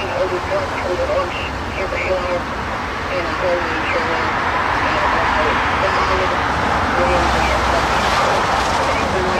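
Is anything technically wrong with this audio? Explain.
Yes, there is an overlap between stream segments at about 6.96 s. At that boundary the time stamps of two consecutive segments claim the same stretch of time, so the player discards the supposed duplicate. That sound was never actually repeated, so a few milliseconds of real audio disappear. The waveform jumps where the two ends are spliced, which produces a single brief click or tiny skip. The timing fits segments about 6 s long.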